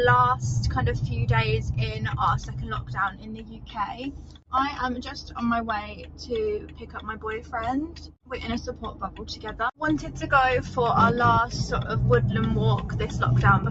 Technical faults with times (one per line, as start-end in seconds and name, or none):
0.00-13.70 noise suppressor applied to music or sounds
2.39-2.64 sound cut by the noise suppressor
3.10-3.77 sound cut by the noise suppressor
4.11-4.53 sound cut by the noise suppressor
5.19-5.37 sound cut by the noise suppressor
5.84-6.29 sound cut by the noise suppressor
6.59-7.24 sound cut by the noise suppressor
7.87-8.31 sound cut by the noise suppressor
8.66-9.45 sound cut by the noise suppressor